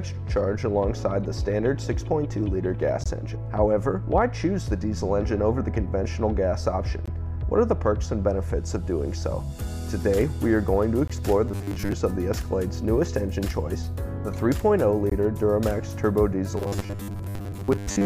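Short, hard-edged holes of silence interrupt the sound at 3.04–3.06 s, 7.06–7.08 s, 11.08–11.10 s and 15.10–15.12 s, each 20 ms long and about 4 s apart. This is a gap between chunks: the audio arrives in 4-second pieces and silence is inserted at each join without any sound being lost. From 11.48 to 11.93 s, and again from 16.57 s to the end, the sound turns into a rigid, metallic buzz at 100 Hz that only loosely tracks the original. This is robotic sound, likely from repeated short buffers. When new audio arrives too rarely, a segment of about 10 ms keeps being replayed, so most of the real audio in those stretches is skipped and the repetition rate is heard as a fixed pitch.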